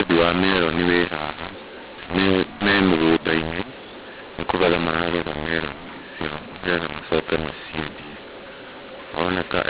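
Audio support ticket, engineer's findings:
mu-law and A-law mixed up, throughout: G.711 mu-law stream decoded as A-law. Speech levels scrambled, harsh distortion, pauses filled with noise; 4 kHz telephone band intact.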